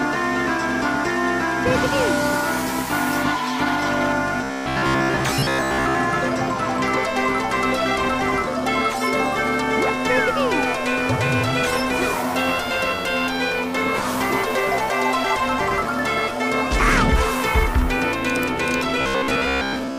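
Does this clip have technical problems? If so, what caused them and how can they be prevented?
Yes: robotic sound from repeated short buffers, at 4.44–5.95 s and 19.01–19.98 s, a rigid 66.7 Hz buzz, likely from most of the audio being replaced by a repeated 15 ms block. A spectrogram shows evenly spaced 66.7 Hz harmonic stripes, and the waveform shows identical repeating cycles. Larger playback or network buffering, so data arrives before it is needed, prevents this.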